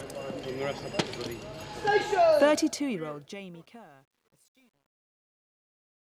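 From 2.43 s to the end, truncation distortion on a fade: the fade-out, consistent with roughly 10-bit undithered quantisation, turns gritty, worst from 3.4 s.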